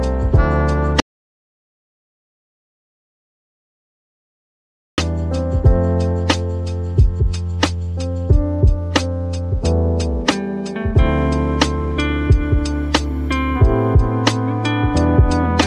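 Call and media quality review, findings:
Audio dropout to silence, 1.00–4.98 s. Input path lost, likely device disconnect, link failure or mute, while the recorder kept writing silence. Sound cuts out abruptly, roughly 4 s of silence with no room tone, content in that span gone.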